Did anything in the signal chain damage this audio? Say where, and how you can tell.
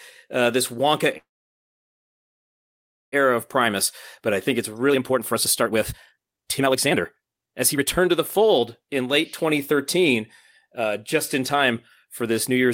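Yes. A call audio freeze runs from 1.17 to 3.14 s: the speech stops and a brief fading continuation gives way to about 1.9 s of near-silence. The speech then resumes where it left off with nothing lost, which points to the network stage, likely delayed packets draining the jitter buffer.

A jitter buffer speed-up follows, from 4.69 to 10.22 s at 132% speed, removing roughly 2 s, then from 10.67 to 12.66 s at 105%, trimming about a tenth of a second. The speech sounds hurried at unchanged pitch because the receiver repeatedly cut out pitch-period-sized pieces.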